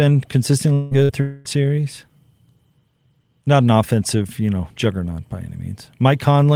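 Speech with three gaps in quick succession near the start of the clip. From 0.73 to 0.94 s and again from 1.21 to 1.48 s the speech gives way to a continuation of the preceding sound, as a buzz or hiss that fades as it goes, with no silence left behind. These are likely long network dropouts, where nothing arrived and the receiver filled the hole. About 180 ms and 240 ms of speech are lost, and the talk resumes further on. On a spectrogram each gap shows as a smeared, repeated copy of the last frame's harmonics, dimming steadily, then an abrupt return to normal structure. Between them, from 1.03 to 1.12 s, a shorter burst of packet loss removes about 60 ms. The last sound is held briefly and turned down before speech picks up past the missing piece. In the waveform this appears as a short, decaying, repetitive stretch with a hard edge where the real signal restarts.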